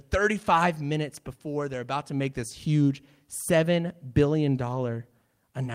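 No technical faults can be heard anywhere in the recording.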